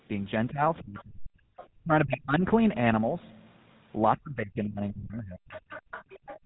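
Throughout, the speech carries the buzzy, gravelly roughness of the GSM full-rate codec, and the damage is plainly audible. Nothing passes above about 3.8 kHz, a ceiling that fits the 13 kbps GSM full-rate coder. Unlike a plain low-pass or narrowband channel, this codec excites its vocal-tract model with sparse, regularly spaced pulses, so the voice sounds rasped and grainy rather than merely dull. The lowest bass is trimmed by the call's microphone high-pass filter, which is expected.

From 0.79 to 1.31 s the talker's speech sinks by roughly 40 dB. This is most likely speech suppressed in double talk, where the echo canceller, faced with both sides speaking, turned the microphone down. It differs from a network dropout because the canceller turned the voice down rather than the link losing audio. The same dip returns at 1.78 to 2.43 s, again around 40 dB deep, and at 4.17 to 5.48 s at roughly 35 dB.

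Faint scraps of a second voice appear at 0.99 to 1.03 s and 1.57 to 1.67 s, about 25 dB below the talker, then a longer stretch from 5.49 to 6.39 s at about 20 dB below. This is likely the other side's voice leaking through, loudspeaker sound the echo canceller failed to remove. The leaked voice carries different speech from the talker's, which rules out reverb or a doubled signal.

From 6.39 s to the end at 6.45 s, the room sound drops by about 32 dB. This is background gated by the echo canceller, which clamped the microphone while the loudspeaker played.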